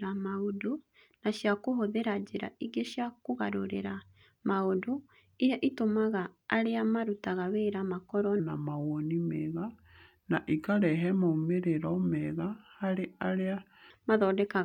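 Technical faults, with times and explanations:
8.40–13.90 s, section at the wrong speed: after "arĩa marutaga wĩra makorũo" the speech turns deep and slow, about three semitones lower at 0.824x speed, likely from a mismatched playback clock.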